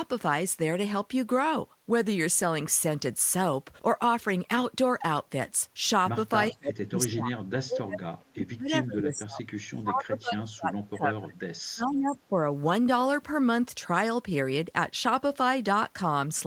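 From 6.52 to 11.38 s the speech sinks and breaks up in pieces, at its worst by something like 35 dB. After a brief recovery it drops out again from 11.59 to 12.36 s, by around 30 dB. This is speech suppressed in double talk, likely caused by an echo canceller that could not tell this talker from the far side's loudspeaker echo while both spoke, and so turned the near talker down too.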